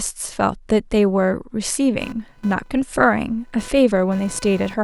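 A faint, chirping buzz pulsing around 500 times a second enters at 2.01 s and runs to the end, well below the speech: computer activity noise riding the shared ground.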